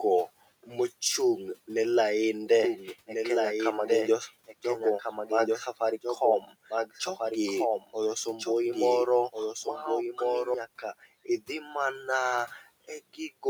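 Right after "ne lainde", at 2.64 s, a doubled audio track kicks in: the same speech plays again about a second and a half behind, a few dB quieter, bone dry, and it drops out abruptly at 10.54 s. It's likely a second capture path or an edit holding two copies out of step.

Inside that stretch the noise suppressor clips the speech twice, from 4.47 to 4.65 s, dipping by about 14 dB, and from 6.41 to 6.54 s, by about 12 dB. It mistook bits of speech for noise, so those moments sound swallowed and faint.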